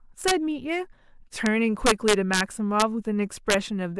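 Integer overflow cracks the speech at 0.28–0.31 s, 1.46 s, 1.86–2.41 s, 2.80–2.82 s and 3.50–3.54 s, with peaks pushed up to about 4 dB past full scale. Each sample over the limit wraps to the opposite sign instead of clipping, producing harsh, violent snaps.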